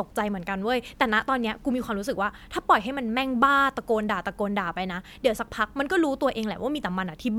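Nothing technical goes wrong anywhere in this speech recording, so there are no faults to point out along the way.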